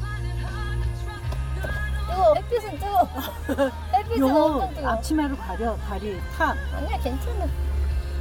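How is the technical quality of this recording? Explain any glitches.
One glitch is audible: a short skip where compressed frames are skipped.

At 2.32 to 2.34 s, compressed frames are skipped. Roughly ten whole frames never reach playback, so the sound lurches forward by about a fifth of a second. The jump size fits frames of about 23 ms.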